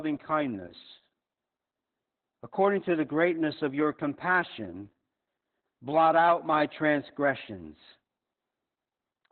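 Heavy Opus voice compression on this speech, likely SILK-only narrowband at around 8 kbps, cuts everything above 4.2 kHz, leaving it muffled, hoarse and slightly robotic throughout.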